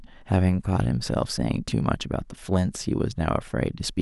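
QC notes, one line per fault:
Nothing to flag here; the speech comes through without any technical faults worth a line.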